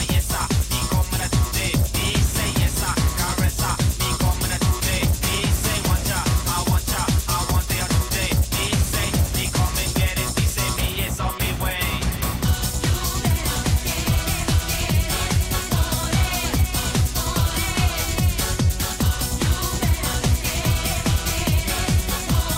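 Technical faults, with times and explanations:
Nothing technical goes wrong anywhere in this one, so there's nothing to flag.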